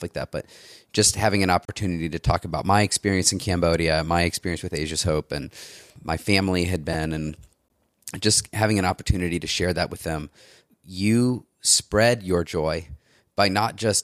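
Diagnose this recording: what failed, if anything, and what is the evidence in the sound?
Codec stage: there is a gap at a join of encoded pieces at 1.65 s, a silence of 32 ms after "just having an", and at 7.68 s, 16 ms before "just having an opportunity". The joins fall six seconds apart. The pieces were encoded separately and joined without trimming, so each encoder's start-up delay and last-frame padding remain as silence, after which the speech resumes where it stopped.

Driver or buffer stage: a repeated buffer at 6.93 s, just after "and my family had". A tiny slice plays twice more with hard joins, heard as a brief click-buzz. The 5 ms repeat fits a very small playback buffer. New audio arrived late, the device replayed the last buffer, and roughly 10 ms of sound was lost.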